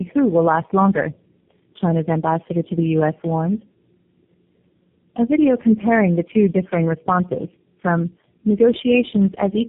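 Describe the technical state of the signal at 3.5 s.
At 3.5 s the speech carries tandem speech coding, present across the whole clip: it sounds re-encoded through several low-rate coders in series, each adding loss, leaving it rough, muffled and warbly. A spectrogram shows nothing above 3.7 kHz and smeared, blotchy formant bands.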